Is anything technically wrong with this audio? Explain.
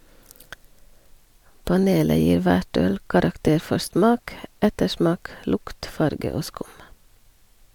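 No, nothing in this speech recording stood out as a technical problem on listening.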